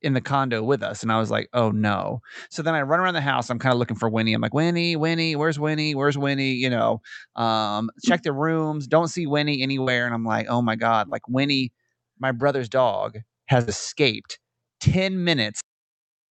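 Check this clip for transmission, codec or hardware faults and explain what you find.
Three kinds of transmission fault are audible in this speech, which passed through a call codec band-limited to 8 kHz.

Burst of packet loss at 9.81–9.89 s and at 13.61–13.69 s, just after "my brother's dog". Late or lost packets left gaps of about 53 ms and 59 ms. The receiver stretched the last sound and faded it. About 60 ms of speech is skipped at each point.

Short concealed packet loss at 11.09–11.13 s. The receiver bridged a 25 ms hole by continuing the preceding sound, then blended back in. About 20 ms is missing, heard as a brief smear.

Cut-off end at 15.61 s. The final buffers were never played out, so the speech stops mid-sound and drops straight to silence with no decay.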